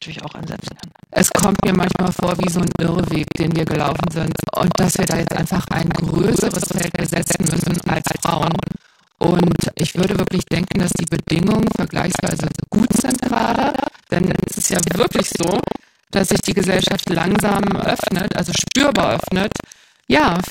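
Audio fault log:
Throughout, buffer tearing: there's a steady robotic rattle at 25 Hz riding on the speech and dropping out in the gaps. The writer and reader of the audio ring buffer have slipped, so every 40 ms period is torn, which fits a buffer being served 25 times a second. About a third of each period carries stale audio from around 150 ms earlier, spliced in with hard joins at both ends, and those repeating edges are the buzz.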